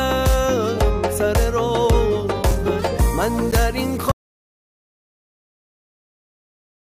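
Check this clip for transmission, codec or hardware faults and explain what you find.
Two transmission faults stand out. Gaps between stream segments at 2.51 s and 3.51 s: mismatched segment timestamps, one second apart, left holes the player padded with silence, about 4 ms and 11 ms, hard-edged but losing nothing. An audio dropout to silence from 4.12 s to the end: the input likely went dead while recording continued, so the sound cuts off into silence without room tone.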